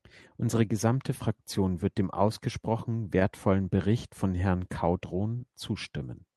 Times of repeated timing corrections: 0.44-5.99

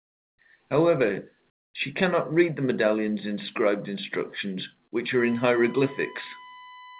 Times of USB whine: 5.19-7.00

